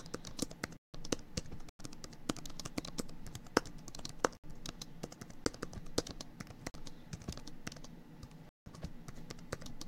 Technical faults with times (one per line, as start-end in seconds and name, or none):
0.77-0.94 block of digital silence
1.69-1.79 block of digital silence
4.37-4.44 block of digital silence
5.44-5.46 block of digital silence
6.70-6.74 block of digital silence
8.49-8.66 block of digital silence
9.17-9.22 compressed frames skipped